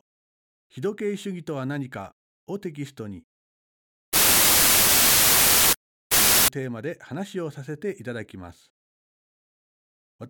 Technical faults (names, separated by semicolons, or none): wrong sample width